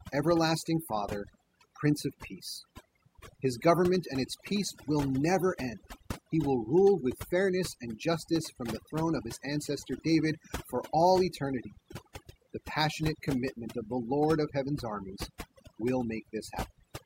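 Throughout the speech, overdone noise removal leaves near-silent gaps with twinkling specks, unlike simple gating, which mutes everything at once rather than band by band.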